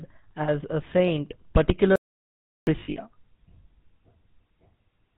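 The whole recording has passed through the GSM full-rate codec at 13 kbps. The codec models the vocal tract as a filter and drives it with a coarse, regularly spaced pulse excitation that keeps only a fraction of the detail. Nothing above 4 kHz survives. The damage is plainly audible: the speech has a constant buzzy, gravelly roughness and a narrow, boxy top end.

From 0.42 to 0.49 s, just before "a saint", GSM frames were lost. About 60 ms went missing, consistent with three consecutive 20 ms frames. The decoder covered the gap by reusing the parameters of the last good frame, so the sound briefly smears into a metallic, ringing hold instead of continuing naturally.

From 1.96 to 2.67 s the audio drops out to silence for roughly 0.71 s. This is likely a momentary loss of the input signal, with the recorder writing silence in the meantime. The sound cuts off mid-flow into dead silence with no room tone at all, and whatever was said in that stretch is gone.

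From 2.80 to 2.97 s there is a second run of lost GSM frames. About 120 ms of frames were dropped across a 160 ms span, and the longest unbroken gap is around 70 ms. The decoder's repeated substitutes hold this passage in a rough, metallic ring.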